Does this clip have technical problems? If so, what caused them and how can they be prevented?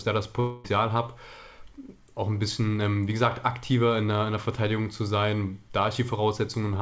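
Yes. A long network dropout likely halted packets from 0.40 to 0.67 s, so a fading buzz or hiss replaces that audio, which never returns. A steadier connection with forward error correction or redundant packets enabled would prevent it.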